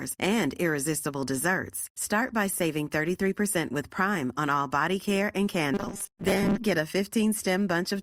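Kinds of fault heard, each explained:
Robotic sound from repeated short buffers: audio likely arrived too seldom, so playback looped the last short chunk while most real audio was skipped. From 5.74 to 6.58 s the speech becomes a rigid metallic buzz at 200 Hz, which fits a 5 ms chunk.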